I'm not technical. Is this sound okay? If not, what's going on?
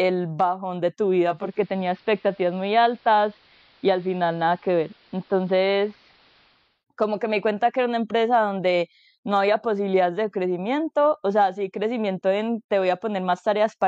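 No. From 1.18 to 6.85 s, after "bajón de tu", digital radio blending to analogue occurs. The speech turns dull and AM-like, with faint hiss, returning by "como que me cuenta".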